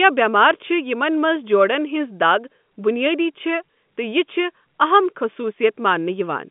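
Nothing stood out on listening to this telephone-band speech, which sits within the usual narrow line band of a G.711 call with nothing heard above about 3.7 kHz.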